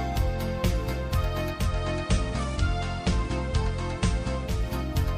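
At 1.52 s the receiver loses its digital signal and performs a digital radio blending to analogue, cross-fading over about 0.27 s onto the station's FM broadcast before returning to digital at 4.65 s. Across that stretch a steady hiss rises to roughly 30 dB below the programme. The overall level stays matched through both transitions.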